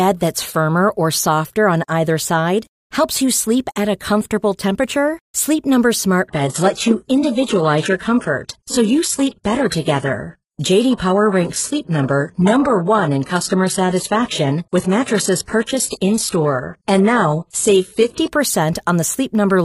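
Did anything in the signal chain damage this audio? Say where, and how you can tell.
Yes. An adaptive stream at a lower bitrate runs from 6.28 to 18.28 s. Network congestion made the player switch encodings: the treble abruptly stops above 11.5 kHz with no gap, which fits a drop from roughly 96 kbit/s AAC to 12 kbit/s HE-AAC.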